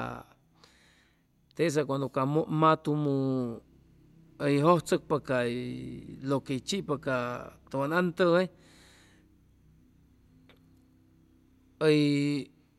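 No technical fault can be heard anywhere in the speech recording. At no point does the audio go wrong.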